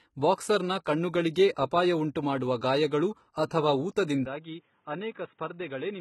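The clip is speech, and across its whole length the treble shows heavy codec damage typical of HE-AAC compression, likely at a low bitrate around 16 kbps. Content stops at about 11.8 kHz, and the upper band sounds synthetic rather than recorded. The coder has kept only the lower spectrum and regenerated the top by copying lower bands upward under a coarse envelope, so the harmonics above the crossover do not line up with those below. From 4.25 s to the end the sound abruptly narrows and dulls, with nothing above 3.8 kHz. There is no gap at the change. The level falls by about 10 dB and a new noise floor appears roughly 40 dB under the signal. This points to the input having likely switched to a poorer device, such as another microphone or a headset in call mode, with its own narrower bandwidth, gain and background noise.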